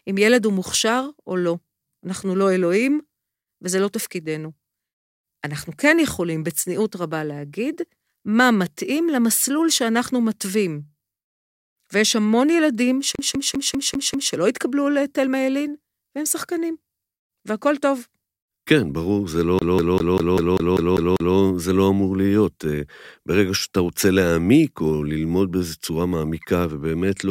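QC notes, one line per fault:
13.15–14.34 s: CD stuck on one turn. A segment of about 0.2 s replays six times with brief mutes at each jump, as the laser keeps skipping back one track.
19.59–21.36 s: CD stuck on one turn. The same 0.2 s stutter returns and repeats nine times, giving the fast, even loop of a skipping disc.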